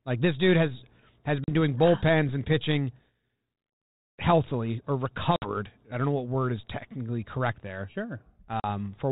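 Hard-edged silent holes at 1.44–1.51 s (after "this dude has has"), 5.36–5.46 s (after "healthily or") and 8.6–8.65 s, each followed by briefly, slightly distorted speech. This is packet loss on an ADPCM call: 40, 60 and 40 ms of audio went missing, and the decoder's adaptive predictor and step size drifted from the sender's until they resynchronised.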